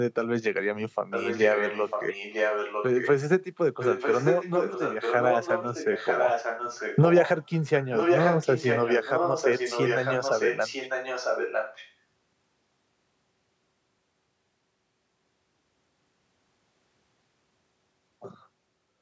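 Echo leak runs from 1.1 to 3.09 s, 3.79 to 7.64 s and 7.81 to 11.94 s: a second copy of the speech trails the original by about 0.95 s, only slightly quieter, so the two overlap and smear together. This is likely a loudspeaker on the far side of the call, whose echo canceller let part of the returning sound through. The echo shares the call's high-pass filtered band, topping out at 8 kHz.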